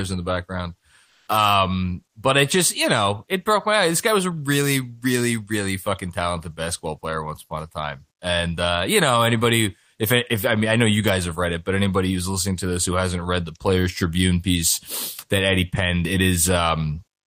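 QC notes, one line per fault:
1.05–1.27 s, comfort noise in place of the background: Right after "in the background", the real room sound gives way to a steady, featureless hiss for 220 ms. The level shifts only about 1 dB. The sender likely paused transmission, and the receiver filled the gap with synthetic noise.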